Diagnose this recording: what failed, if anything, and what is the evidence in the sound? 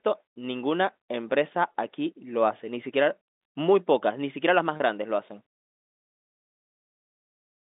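Packet loss with pitch repetition at 1.72 s, 3.25 s and 4.77 to 4.80 s: at the network stage, gaps of 20, 50 and 30 ms were bridged by repeating the last pitch period, heard as brief held, buzzy sustains over the narrowband G.711 telephone line.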